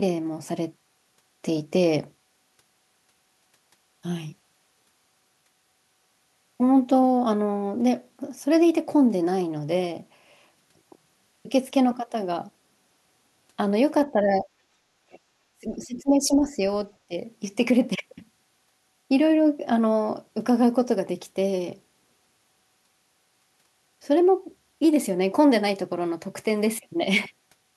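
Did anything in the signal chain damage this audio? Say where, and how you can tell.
Yes, and it's in the call processing. The speech gets pulled down in three spots: 14.11 to 14.46 s by roughly 10 dB, 15.53 to 16.6 s by around 20 dB (the longest, about a second), and briefly at 17.08 to 17.14 s by some 15 dB. That's speech suppressed in double talk. Both ends were likely talking at once, and the echo canceller couldn't tell the local voice from loudspeaker echo, so it ducked everything.

Same stage, second symptom: the other side's voice leaking through. There are faint scraps of a second talker at 15.11 to 15.19 s and again at 15.97 to 16.02 s, sitting roughly 30 dB under the main speech. The second one lands right inside the big suppression dip. That points to the canceller likely leaving some far-end loudspeaker sound in the mic signal while it was busy clamping down on the overlap.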